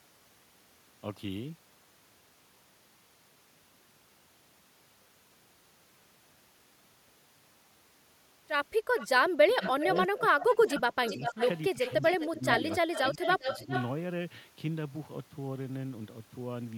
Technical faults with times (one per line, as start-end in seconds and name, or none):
8.98-9.07 echo leak
9.25-12.43 speech suppressed in double talk
9.62-10.00 echo leak
10.41-13.87 echo leak
12.76-13.71 speech suppressed in double talk